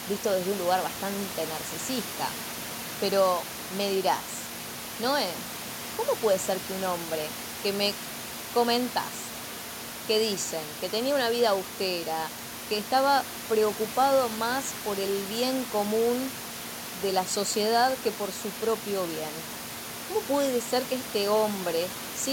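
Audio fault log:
Nothing stood out on listening to this speech recording, apart from the room's own background noise sitting about 13 dB below the speech.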